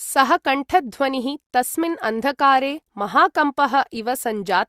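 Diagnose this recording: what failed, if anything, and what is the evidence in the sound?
No fault is audible here.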